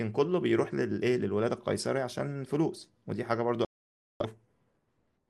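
At 3.65 s the receiver stops getting usable data, either losing the digital signal or rejecting frames that fail their checksum, and it mutes rather than play corrupted audio. The result is a digital broadcast dropout: the speech drops to silence and stays gone until about 4.26 s, when clean frames resume and the sound returns. The gap of roughly 0.6 s points to around a dozen lost frames, and whatever was said in that stretch is simply missing.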